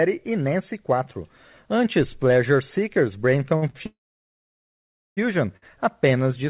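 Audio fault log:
3.56–3.65 s, 3.70–3.77 s and 5.57–5.80 s, short stall from a late packet: the sound is briefly held and stretched, with a faint buzzy smear, before carrying on from the same point with nothing lost. Each time a packet missed its slot, the jitter buffer ran dry and the receiver repeated the last sound to cover the wait, for about 57 ms, 41 ms and 53 ms. The last stall comes just before "apenas de".
3.86–5.20 s, call audio freeze: the last sound turns into a short fading buzz, then about 1.2 s of silence. The audio then resumes with "apenas de", so roughly 1.3 s has been inserted and nothing is missing. The likely cause is packets held up in transit, which emptied the jitter buffer while the receiver concealed the gap. The telephone-band sound, with nothing above 4 kHz, fits G.711 A-law at 64 kbps.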